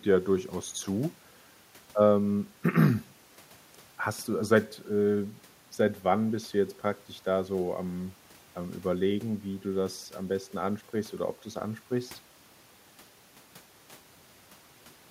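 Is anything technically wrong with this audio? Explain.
No, nothing technically wrong turns up in this speech recording; there's nothing here to flag.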